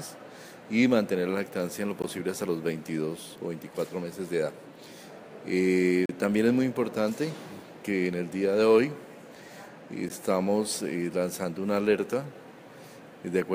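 At 2.02 s, from 6.06 to 6.09 s, and at 10.09 s the sound stops dead for an instant, each time a gap between stream segments. The holes last about 18 ms, 36 ms and 12 ms, have hard edges, and recur every 4 s, matching the segment boundaries. The time stamps of adjoining segments left a small space, and the player filled it with silence. Unlike a dropout, no audio is lost; the sound resumes exactly where it stopped, just slightly late.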